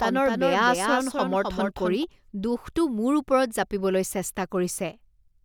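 From the very start until 2.04 s, a doubled audio track runs under the speech. A second full-band copy trails the original by roughly 300 ms, about 5 dB quieter, with no reverberant tail or room colour, so it sounds like a dry, late echo. The likely cause is a slower capture path or an out-of-step edit. On a spectrogram, each harmonic pattern reappears 300 ms later. The copy cuts off abruptly at 2.04 s, just before "দোষটো মোৰ".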